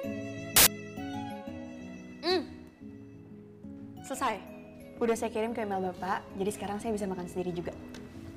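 From 0.56 to 0.67 s, file tags played as audio: an embedded cover picture's compressed data decoded as samples, giving a very loud 0.1 s white-noise burst with hard edges.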